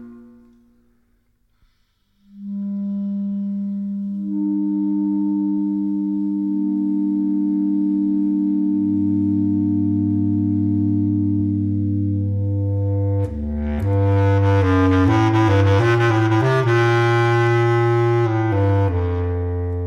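From 13.99 s to 18.87 s the loud parts of the sound turn harsh and fuzzy, with a gritty, buzzing edge on every peak rather than occasional crackles. This is hard clipping: the signal was pushed about 8 dB beyond what one stage in the chain could carry, so the tops of the waveform were sliced off flat. Those squared-off peaks generate strong high harmonics, which is where the fizzing roughness comes from.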